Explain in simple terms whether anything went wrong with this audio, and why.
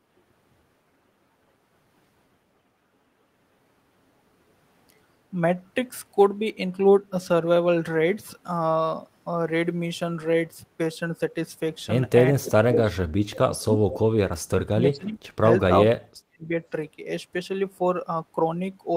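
Yes, a few things went wrong in the second half of the speech. Between 12.36 and 13.79 s, then again from 14.49 to 15.47 s and 15.67 to 16.52 s, the voice sinks, sometimes nearly to nothing, for roughly a second in the first stretch and under a second in each later one. That's speech suppressed in double talk, likely because both ends were talking at once and the echo canceller, unable to tell the talker from the loudspeaker's echo, turned everything down.

Around those same moments there are two tiny ghost copies of the voice, at 13.61 to 13.65 s and 13.91 to 13.99 s, arriving about 371 ms late. The first is very faint and the second is noticeably louder. That's echo leak: the far end was probably on a speakerphone, and its echo canceller didn't fully scrub what the microphone picked up from the speaker, so a delayed scrap got sent back.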